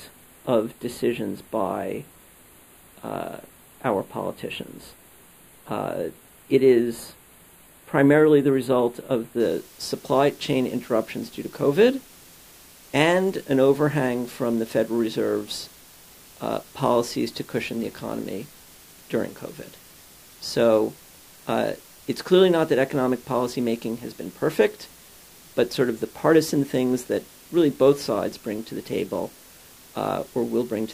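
One channel runs a fraction of a millisecond late, which fits a delay of about four samples, and the two channels are summed to mono from 0.0 to 9.4 s. This channel delay causes comb filtering: shared content cancels near 5 kHz, leaving the sound thin and phasey at the top.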